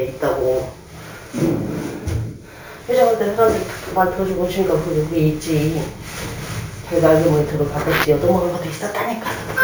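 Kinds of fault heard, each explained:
Imaging from sample-and-hold upsampling: each sample was simply repeated, pointing to 16 kHz audio raised to 48 kHz without smoothing. A bright metallic fizz, about 22 dB below the sound, tracks its level. On a spectrogram, a mirrored image fills 8 to 16 kHz; waveforms show staircase steps.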